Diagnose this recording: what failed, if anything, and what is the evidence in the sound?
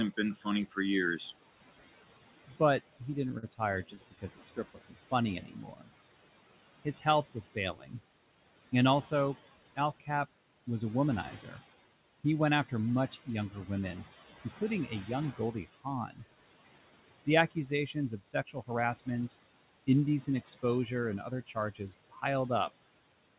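Call processing: the noise suppressor pulls the steady background down by about 17 dB for the whole clip, gating it frame by frame. The residual noise dips between phrases and swells under them.

Call processing: the same noise suppressor misreads parts of the speech as noise and attenuates them by about 13 to 16 dB. Soft consonants and endings sound swallowed at 0.17–1.21, 2.48–5.90, 6.85–7.94, 9.11–11.57, 12.69–16.21, 17.26–19.34 and 20.27–22.23 s.

Network and jitter buffer: packets arrive late repeatedly, so the buffer underruns eight times between 3.12 and 4.19 s. The receiver stretches the last sound across each gap, the longest about 45 ms. Nothing is lost, but the speech stutters and drags.

Jitter buffer: after a backlog builds up, the receiver trims short pitch-period slices, about 70 ms in total, to reduce delay. From 18.25 to 18.99 s the speech runs at 110% speed with unchanged pitch and sounds briefly hurried.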